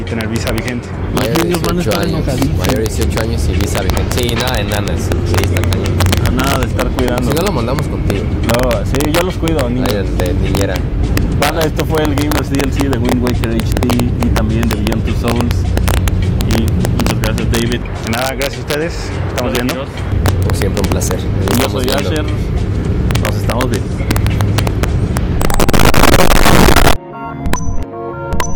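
Integer overflow runs through the whole clip: with the signal driven about 2 dB too hot, around one percent of samples wrap to the opposite extreme, giving harsh cracks on loud peaks. The waveform shows spikes flipping sign; the spectrogram shows thin broadband vertical streaks.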